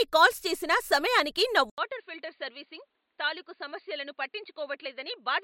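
Speech that, at 1.70 s, just after "కాల్స్ చేసినా సమయానికి నా", drops out for 80 ms and resumes about 10 dB quieter, with nothing above 4.7 kHz and a faint new background hiss. The input likely switched to a poorer device. A simple filter would not also shift the level and noise floor.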